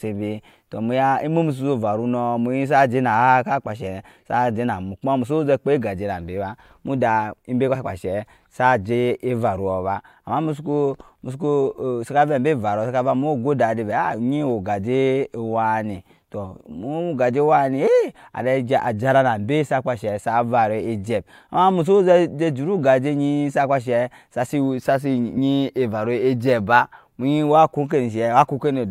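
A skip interrupts the speech at 7.74 s, just after "ba muda", and again at 25.36 s. These are compressed frames skipped: the decoder jumps ahead, by what sounds like one 21.3 ms frame the first time and about two the second.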